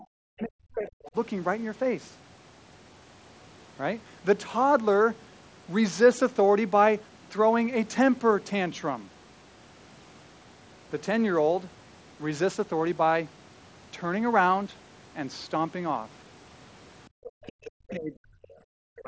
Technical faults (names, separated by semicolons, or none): other side's voice leaking through; speech suppressed in double talk; background gated by the echo canceller